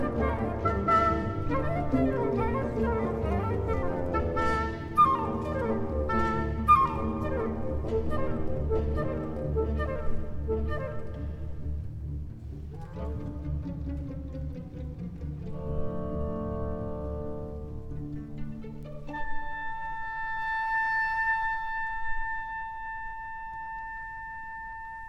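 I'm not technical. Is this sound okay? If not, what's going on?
No. A bit error spike at 18.83 s: one stored digital value briefly flipped to a wrong number and back, leaving a single sharp tick.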